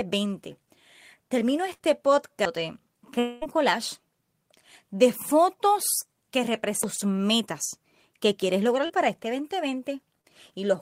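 Burst of packet loss at 1.73 to 1.81 s: a short run of speech packets failed to arrive in time, so the receiver stretched the last sound it had for about 59 ms, fading it as it went, and then resumed further along. About 60 ms of the original speech is gone. It is heard as a brief held buzz or fading hiss, followed by a jump where the speech picks up again.

At 3.19 to 3.43 s the speech gives way to a long continuation of the last sound, and the stretch is most likely a long network dropout. For about 220 ms the receiver kept extending and fading what it last received, and it never fell to silence before the real signal came back. Roughly 220 ms of speech is missing, so the sound smears into a decaying buzz or hiss and then restarts at a later point.

CD skip at 6.83 s, between "de fotos que" and "metas que": the pickup jumped to a different turn of the disc's spiral. The audio mutes for only a few milliseconds, which is heard as a small tick, and then playback carries on from another spot. 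The speech therefore lurches abruptly instead of flowing on, jumping forward or back by a whole number of disc turns.

Short concealed packet loss occurs three times: at 6.95 to 7.00 s, just before "metas que"; at 8.86 to 8.91 s, right after "metas que"; and at 10.21 to 10.26 s. In each case about 20 to 40 ms of audio never reached the decoder. The gap was bridged by extending the preceding sound, using its pitch where it was voiced and shaped noise where it was not, and then blending back in. Each one is a brief smear or wobble, and short consonants can drop out.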